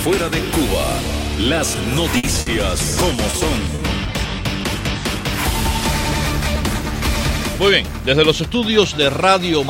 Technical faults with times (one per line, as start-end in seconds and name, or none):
2.17-2.26 burst of packet loss
2.41-2.49 short stall from a late packet
3.30-3.36 short stall from a late packet
3.75-3.81 short stall from a late packet